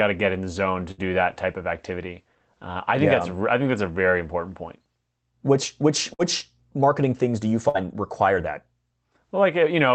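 At 0.91 to 1.01 s, 6.14 to 6.22 s and 7.69 to 7.77 s there's a burst of packet loss each time. A run of packets went missing, so the receiver stretched the last bit of speech for roughly 50 to 60 ms, fading it into a buzzy or hissy smear, then jumped ahead, with about 60 ms of the speech simply gone. It's all heard through the call codec's dulled top end, which sounds like an Opus stream cut off around 8 kHz.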